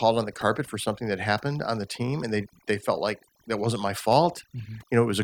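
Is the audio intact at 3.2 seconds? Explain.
No. At 3.2 seconds the speech is affected by overdone noise removal, which runs through the whole clip rather than starting or stopping near that point. The noise reduction was set too aggressively, so frequency bands close to its noise estimate are pulled far down or gated off entirely, and the softer parts of the voice are removed along with them. The result is a background that drops and breaks up into twinkling, warbling specks.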